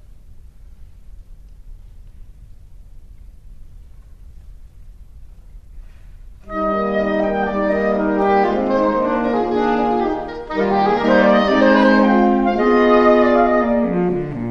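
No technical faults are audible.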